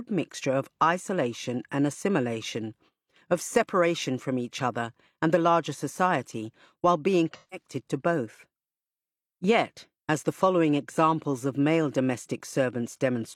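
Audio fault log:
7.33–7.67 s, AAC frame loss with concealment: a run of AAC frames failed to arrive, so the decoder rebuilt the gap from the last good spectrum rather than going silent. The missing stretch comes to roughly 170 ms, which fits four lost frames. Right after "larger society while being" and before "to both", the sound turns into a smeared, noise-like patch that holds the earlier spectral colour without its real detail.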